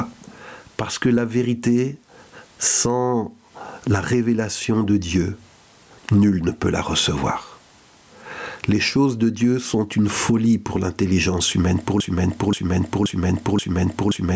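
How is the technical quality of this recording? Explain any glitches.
The recording has two clear faults: the level breathes throughout, and the final stretch sticks in a repeating loop.

Gain pumping runs the whole length. The level swings by roughly 20 dB, so loud and soft parts sit squashed together. The likely cause is gain set far too high, with a fast limiter clamping down on each peak.

A broken-record loop starts at 12.00 s and lasts to the end. A 528 ms fragment repeats exactly, back to back, four times, replacing whatever should have followed. A stalled player, encoder or stream likely kept resending the last piece it held.

The call-style microphone processing, with nothing above 8 kHz, is normal here.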